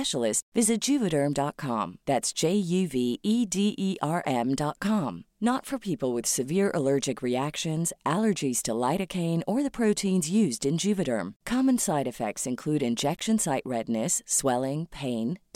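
A speech recording with one corrupt frame decoded. Between 13.17 and 13.22 s, right after "side effects include" and before "site redness", a short burst of misplaced energy appears and peaks at around -25 dBFS. Damaged bits in the compressed stream were decoded as if valid, so wrong gains or misread spectral codes put energy at the wrong frequencies. The 54 ms length fits a couple of consecutive frames being hit.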